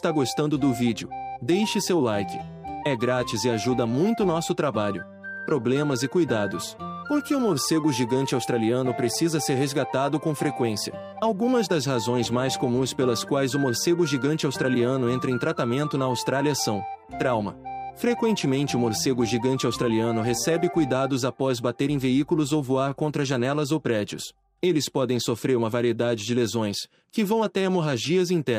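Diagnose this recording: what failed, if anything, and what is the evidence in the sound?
The converter clocking most likely failed: two devices ran on separate clocks about 200 ppm apart, so a single sample is dropped or repeated whenever the drift reaches a full sample. The result is clock slip clicks, faint regular ticks roughly every tenth of a second from 0.14 s to 28.51 s.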